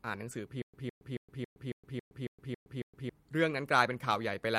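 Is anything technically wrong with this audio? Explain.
Yes, two faults. At 0.31 s, a lost packet rebuilt from error correction: the decoder played a 20 ms low-bitrate copy, so there's no gap, unlike plain packet loss, just a briefly rougher, noisier moment.

From 0.62 to 3.09 s, a stutter with silent gaps: a 159 ms speech fragment repeats every 275 ms with 116 ms of digital silence between, likely a stalled player replaying its last buffer.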